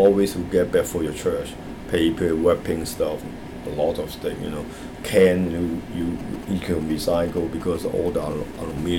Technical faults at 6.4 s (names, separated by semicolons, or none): GSM signalling bursts